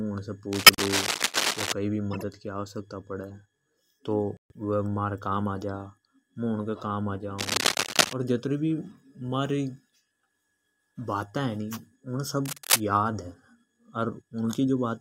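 Cable scratch noise runs from 0.52 to 1.73 s, a dense, uneven rustling about as loud as the speech itself. It returns from 7.38 to 8.13 s and from 12.45 to 12.80 s, slightly louder than the speech each time. The likely cause is a worn cable, connector or control being moved, so its contact resistance jumps around rapidly and scatters bursts of noise into the signal.

Corrupt frame decoded faults fall at 0.65 to 0.82 s, 2.12 to 2.24 s and 4.37 to 4.52 s, each spanning several compressed frames. Flipped bits in those frames were decoded anyway, so wrong gains and misread codes put energy at the wrong frequencies for as long as the damage lasts. The result is a brief glitch that is strong at 0.65 s, where it sits inside the first scratch, moderate at 2.12 s, and faint at 4.37 s.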